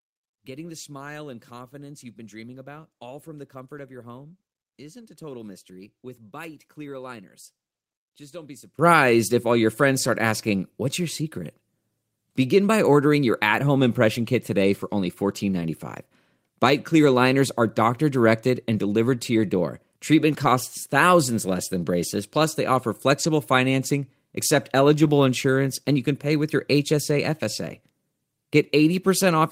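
A speech clip with two faults. From 0.0 to 8.79 s, ending just before "if all your friends", the sound collapses by about 19 dB, leaving a faint residue. This is likely one channel inverted, so the centred speech cancels when left and right are summed to mono. Brief rough, noisy patches of about 20 ms each occur at 10.61 s, 14.23–14.25 s (between "your at home impression" and "kit today for only"), 15.61 s, 20.43–20.45 s, 23.23–23.25 s (just after "braces plus they offer"), 25.03–25.09 s (about 40 ms, which fits two packets) and 27.69 s. These are lost packets rebuilt from error correction. The decoder played a low-bitrate redundant copy in place of each missing packet, so there is no dropout, only a short, coarser stretch.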